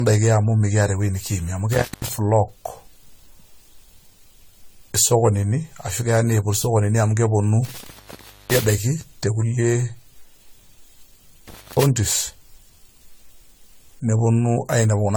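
Throughout the recording, the speech has a swirly, smeared, hollow quality, with blurred consonant attacks and nothing above 20 kHz. The likely cause is generation loss: repeated lossy re-encoding, around ten passes, each adding fresh quantisation noise and spectral holes, consistent with AAC-LC at roughly 64 kbit/s.

A loose cable or plug then opens momentarily in three places, an intermittent contact. Each break cuts the signal with crackle at its edges, leaving faint hiss while open. The first follows "mikiata ewoi nikiimie amu" between 1.73 and 2.13 s, open for 0.18 s. The second follows "niput isokonini amu keponu" from 7.65 to 8.72 s, open 0.61 s. The third runs from 11.48 to 11.83 s, open 0.23 s.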